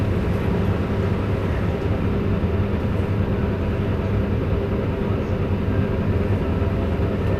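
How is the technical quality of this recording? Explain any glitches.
The technical quality of the recording is sound, with no glitches to explain.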